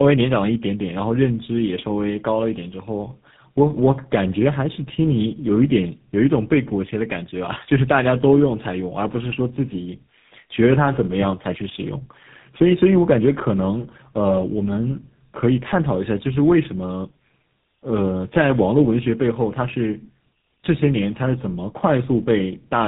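From start to finish the speech carries tandem speech coding. The signal passed through two low-rate speech codecs in series, a sound that fits G.729A followed by GSM full rate with a G.711 link between them, and each decode-and-recode stage compounded the damage of the one before. The result is rough, muffled and warbly speech, rougher and noisier than either codec would leave alone, with nothing present above 3.8 kHz.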